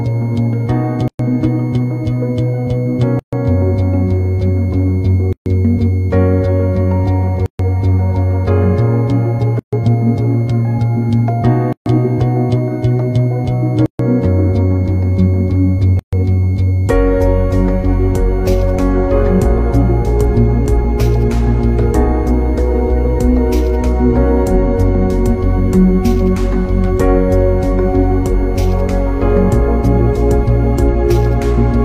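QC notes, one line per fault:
Throughout: switching supply whistle. A thin high tone sits near 2.1 to 2.2 kHz, about 30 dB below the programme. Its pitch wanders slightly within that band. A switching power supply running in an audible burst mode, or beating with another one, produces this whistle.
1.08, 3.19, 5.33, 7.46, 9.59, 11.73, 13.86 and 15.99 s: gap at a join of encoded pieces. Continuous sound drops out, with smeared edges, for 115 ms at first and 133 ms afterwards, about every 2 s. The sound then resumes where it stopped. Separately encoded pieces were joined untrimmed, keeping each encoder's start delay and end padding.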